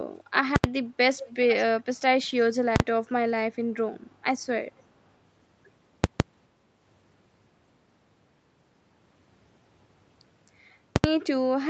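At 0.56 s, invalid numbers at full scale hit an 80 ms block. Broken calculations pinned the output at its limit, giving loud pops with silence between.

From 1.15 to 1.55 s, an echo leak adds a faint copy of the speech, 430 ms late and roughly 15 dB quieter. An echo canceller likely missed loudspeaker pickup.

At 2.76 s, the same fault's 40 ms block is a single bang. At 6.04 s, a 160 ms block pops at each edge. At 10.96 s, an 80 ms block does too.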